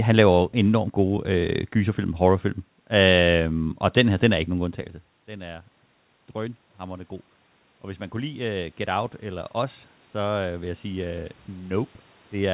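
From 7.82 s to the end, automatic gain rising is audible. After the talker moves around 4.5 s, the input drops by about 17 dB, and the gain control responds by gradually raising its gain. Voice and room noise swell together. On a waveform the envelope widens steadily across this stretch. On a spectrogram the speech and the background floor both brighten in step, all below a 4 kHz ceiling that fits a G.711 call path.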